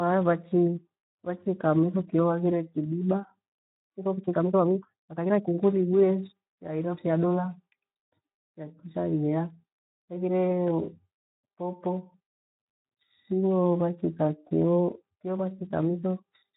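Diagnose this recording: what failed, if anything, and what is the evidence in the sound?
The codec stage is where this one went wrong: it's Speex, and the damage is plainly audible across the whole clip. The speech has that hoarse, grainy CELP character you get when the excitation is starved of bits. That points to a low-quality setting, something around 11 kbps, where the encoder simply can't model the voice cleanly.

Then there's a time-stretched section from about 3.57 to 5.61 s, starting right after "miho kio aghire kidiba". The pace jumps to roughly 1.63 times normal while the pitch holds steady, so it sounds rushed, with short pieces clipped out to squeeze the audio. That's most likely a playback or processing stage fitting the audio to a length by dropping short segments rather than resampling.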